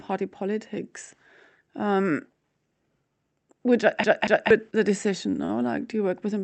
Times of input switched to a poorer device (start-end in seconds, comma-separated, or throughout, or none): none